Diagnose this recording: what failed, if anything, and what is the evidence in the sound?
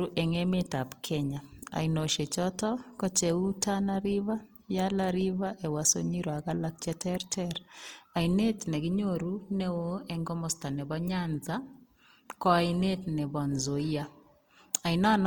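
Codec stage: throughout, speech turns grainy and rough, likely Opus compression in CELT mode near 24 kbps; the spectrogram shows noise-filled bands up to 20.2 kHz.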